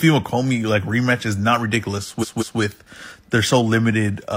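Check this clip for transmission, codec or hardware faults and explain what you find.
One codec fault is present: repeated frames, from 2.19 to 2.56 s. A block of about 186 ms of the speech plays two extra times, which fits a run of about four compressed frames being sent or stored more than once. The decoder replays identical data, so the passage stutters and gains 0.37 s of extra time. On a spectrogram or waveform, the same pattern appears three times in a row.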